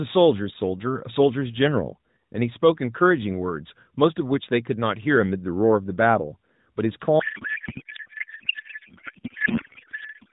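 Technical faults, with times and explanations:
7.2 s to the end (10.3 s), codec payload misread: the speech suddenly collapses into garbled, warbly noise that barely tracks it. That fits octet-aligned AMR frames being unpacked as bandwidth-efficient, so every field lands in the wrong slot, and the mismatch never gets resolved before the clip ends.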